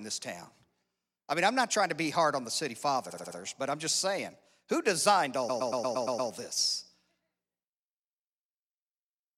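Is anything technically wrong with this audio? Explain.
Yes. The speech has two kinds of fault. Repeated frames occur twice. From 3.09 to 3.37 s, a 70 ms block plays four extra times. From 5.48 to 6.30 s, a 116 ms block plays seven extra times. Stored compressed frames were decoded again, so the sound stutters. This adds about 0.28 s and 0.81 s.

A sudden gain jump follows between 6.47 and 6.57 s. The level drops by about 4 dB from one sample to the next. Speech and background noise fall together. The likely cause is a digital gain change applied without a ramp.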